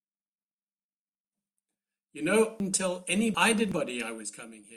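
From 2.60 to 3.72 s the speech is briefly jumbled: chunks out of order. A block of about 0.37 s arrived late and plays after the two blocks that should have followed it, so nothing is missing but the sequence is scrambled. There are three hard joins. On a waveform the envelope jumps abruptly at each seam, and a spectrogram shows formant tracks breaking and resuming out of step.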